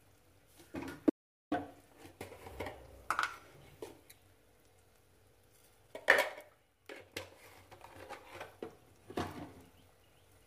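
At 1.10 s the sound cuts to total silence until 1.52 s, about 0.42 s. This is an audio dropout to silence, likely from a lost input link. No room tone remains.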